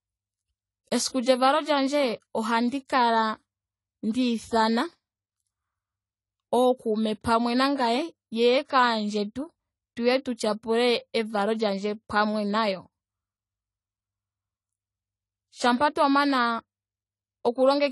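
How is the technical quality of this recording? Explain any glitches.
The recording has clearly audible lossy-codec damage from start to finish, most likely AAC compression.

Throughout the speech, nothing sits above 11.5 kHz, and the sound is dull and smeared, with a fizzy, warbling edge on sibilants and held vowels. At a low bitrate, AAC-LC has too few bits for every band, so it drops the top end and coarsely quantises or substitutes what remains; the damage fits roughly 32 kbps. A spectrogram would show a hard ceiling at 11.5 kHz, with patchy, holed high bands beneath it.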